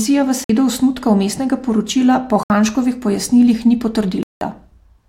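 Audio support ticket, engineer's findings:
Speech drops to full silence three times, then resumes: 0.44–0.50 s (about 52 ms), 2.43–2.50 s (67 ms), 4.23–4.41 s (182 ms, longest). Likely a Bluetooth stall on the wireless link. Interference delays packets, the headphone buffer runs dry, and output halts until retransmissions arrive. Gaps are hard cuts rather than fades. Irregular spacing and varying lengths point to intermittent RF interference, not a fixed clocking fault.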